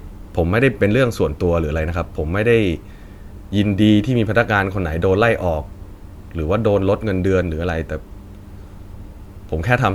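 Listening through the speech recording, nothing stood out as a technical problem at any point.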